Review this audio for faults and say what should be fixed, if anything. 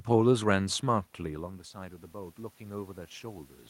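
Automatic gain rising runs from 1.18 s to 3.58 s. Shortly after the talker moves back from the microphone at around 1 s, the input drops by about 17 dB, and the gain control slowly climbs about 7 dB to compensate. Voice and room noise swell together over those 2.4 s. On a waveform the envelope ramps steadily upward, and on a spectrogram the noise floor brightens along with the speech. Fixed gain with steady mic distance would prevent it.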